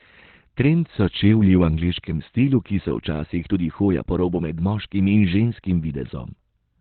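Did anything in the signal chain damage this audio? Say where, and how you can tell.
Yes, at the codec stage: the speech is muffled and hoarse throughout, with nothing above 4.3 kHz, likely Opus compression in narrowband speech mode at roughly 12 kbps, hoarse rather than MP3-swirly.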